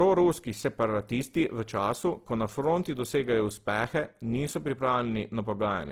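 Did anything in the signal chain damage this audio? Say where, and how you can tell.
Yes, at the codec stage. Throughout the speech, low-bitrate smearing persists, which points to low-bitrate audio saved at a high bitrate, likely a roughly 16 kbit/s Opus-style encode re-encoded as 256 kbit/s MP3. A spectrogram shows blurred, patchy detail and nothing above 20.2 kHz.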